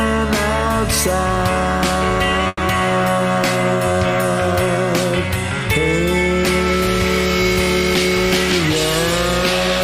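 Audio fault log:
2.47 to 2.60 s, call audio freeze: the sound holds as a fading buzz for about 110 ms, ending in a brief 10 ms silence, then resumes where it stopped. This likely comes from late packets draining the jitter buffer, adding 110 ms of delay with nothing lost.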